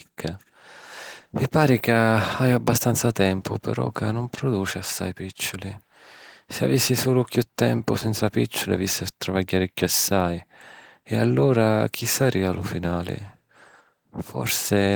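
The speech shows no technical fault, coming through Opus voice compression in its full-band hybrid mode with only light coding softness and content reaching up to about 20.2 kHz, which fits a bitrate of around 20 kbps.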